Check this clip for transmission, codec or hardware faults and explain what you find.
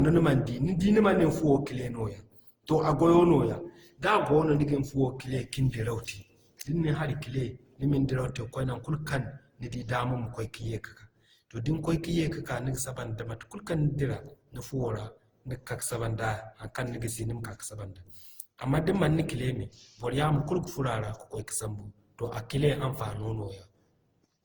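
There's one codec fault, and it runs through the whole speech recording: generation loss. The sound is swirly and hollow, with smeared, soft-edged consonant attacks, and it's worse than a single pass at what sounds like roughly 48 kbit/s Opus would give you. The likely cause is the audio being decoded and re-encoded around ten times, each pass quantising on a shifted frame grid so the noise and spectral gaps pile up. The band still reaches about 20.2 kHz.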